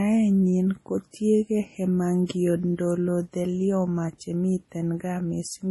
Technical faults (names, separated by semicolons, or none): MP3 compression